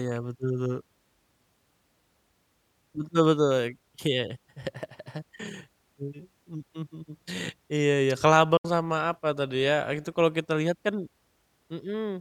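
At 8.57 s, what is most likely a Bluetooth dropout occurs: a short run of audio packets, about three by the sound of it, seems not to have reached the headphones in time, so there was nothing to play. The speech cuts to silence with abrupt or briefly faded edges for about 70 ms, ending by 8.65 s, then resumes further along, as though it had kept playing through the gap, rather than picking up where it stopped.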